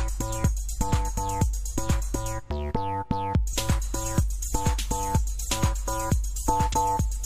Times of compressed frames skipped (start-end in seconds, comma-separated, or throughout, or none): 3.49-3.54, 6.69-6.74